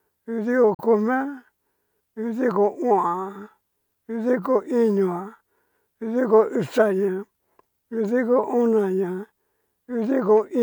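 At 0.74 s the speech drops out in a digital broadcast dropout, with silence until about 0.83 s. The receiver muted because a frame either went missing or failed its error check, then resumed once valid frames arrived again. The hole is brief, roughly 43 ms of programme gone, which fits a single lost frame. A fade of about 3 ms into the mute makes the cut sound abrupt, a quick fade into silence rather than a soft dip.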